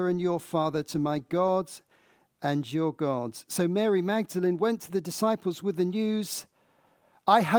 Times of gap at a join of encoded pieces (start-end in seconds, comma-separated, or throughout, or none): none